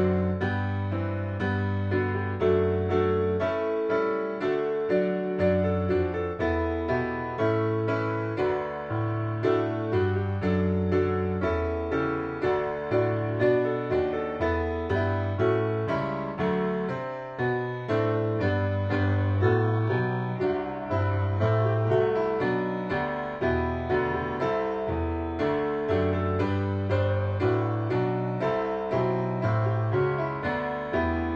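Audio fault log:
18.00–22.00 s adaptive stream at a lower bitrate: sudden, gapless switch to dull treble, pointing to a very low-bitrate HE-AAC version; the spectrogram shows a hard ceiling at 7.9 kHz.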